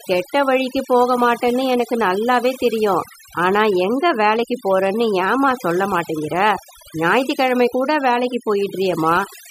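Overdone noise removal runs through the whole speech clip. A noise reduction stage was pushed too hard. Any frequency band that sat close to its noise estimate was pulled far down or shut off. Quiet parts of the voice fell into that range and were cut along with the noise. Between phrases the background drops and breaks up into twinkling, warbling specks.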